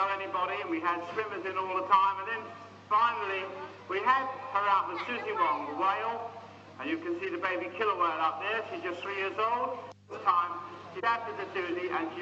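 No faults can be heard anywhere in this recording.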